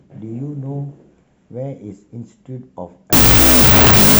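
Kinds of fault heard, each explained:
Wrong sample width: from 3.13 s loud noise buries the speech, slowed to half speed and an octave lower, as 16-bit samples are read as unsigned 8-bit.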